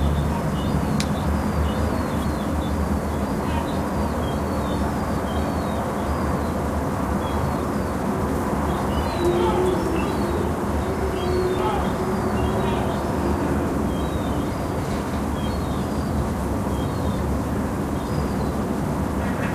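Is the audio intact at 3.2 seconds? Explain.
Yes, at 3.2 seconds the audio is intact, with no dropout, click, distortion or other fault at that moment.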